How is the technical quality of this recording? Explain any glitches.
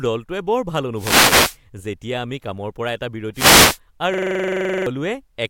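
The recording has three glitches: two bursts of radio noise and one stuck loop near the end.

From 0.95 to 1.58 s and again from 3.34 to 3.79 s, there is a wireless microphone noise hit. The FM radio link from the microphone faded as reflected copies of the signal cancelled each other. With the carrier weakened, the receiver's own noise came up through the audio and masked the speech. Each fade is heard as a brief swish of static over the talker.

From 4.14 to 4.86 s, there is a system hang loop. The computer or its audio driver stopped supplying new audio, but the sound hardware kept replaying the last filled buffer. A 42.7 ms slice, which fits a 2048-sample buffer, repeats 17 times at 23.4 Hz. It sounds like a rapid, buzzy stutter rather than speech, and about 0.7 s of the real recording is lost beneath it.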